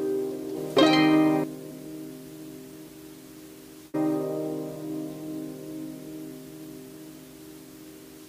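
At 0.54 to 0.57 s, 1.70 to 1.72 s and 2.86 to 2.89 s the audio jumps forward, a classic case of compressed frames skipped. Each time a handful of frames, which fits a frame length of 46.4 ms, were either missing or refused by the decoder, so roughly a fifth of a second of sound just vanishes. You hear a sudden lurch ahead, with a quick glitch right at the join.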